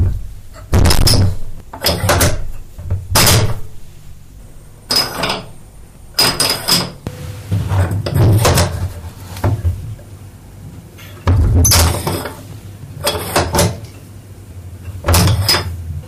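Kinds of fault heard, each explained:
Hard clipping: throughout the clip, the signal is driven about 36 dB past what some stage in the chain can pass, so every peak is sliced flat at the ceiling and around a tenth of all samples sit pinned there. Those squared-off tops generate a spray of high harmonics, so instead of occasional crackle on peaks, every loud moment turns into a harsh, buzzing fuzz that rides on the sound for the whole 16 seconds.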